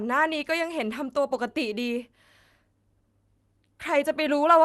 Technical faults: none

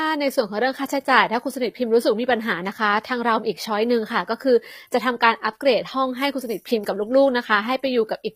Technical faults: HE-AAC compression; dropped samples

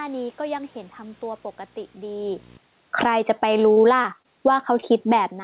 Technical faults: video or display buzz; automatic gain falling; automatic gain rising; burst of packet loss; short concealed packet loss

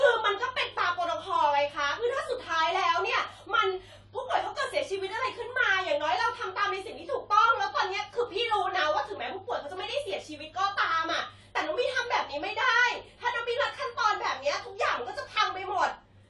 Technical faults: AAC compression

